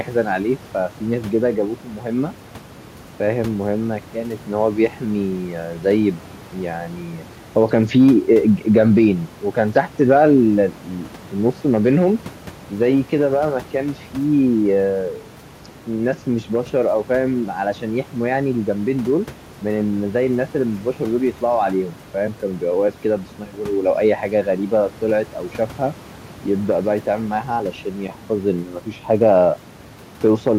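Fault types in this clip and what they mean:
Nothing stood out on listening to this speech recording.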